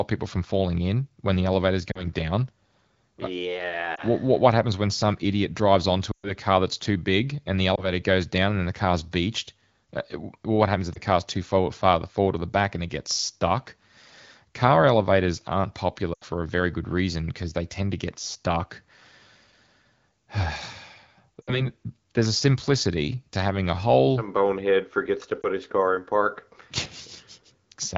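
Lost AMR speech frames occur at 1.91 s (after "when the elevator is"), 3.95, 6.11, 7.76 (between "too big and the" and "goes down and then"), 10.94, 16.14 (between "elevators aren't" and "a very good reason"), 21.42 and 25.42 s. Radio errors made the decoder discard frames and stretch the last good pitch and vocal-tract settings while lowering the gain. The single 20 ms losses sound like brief dips or warbles. The 120 ms gap at 6.11 s drops to near silence within two frames. On a spectrogram each loss shows as a short stretch of flattened, repeated harmonics that thins out. On a waveform it shows as an envelope dip. The wideband coding itself sounds clear, which fits a rate around 12.65 kbit/s.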